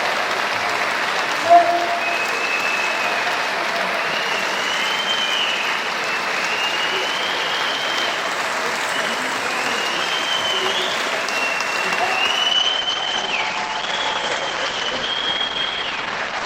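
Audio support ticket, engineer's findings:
Adaptive stream at a lower bitrate, 12.53 s to end of clip. Player switched down to a lower-bitrate rendition mid-stream, probably after a throughput dip on the connection. Abrupt quality drop with no gap: nothing above 8.9 kHz, top end thin, coding artefacts more audible. Sound points to a step from a mid-rate Opus stream down to a very low one, which fits about 12 kbit/s.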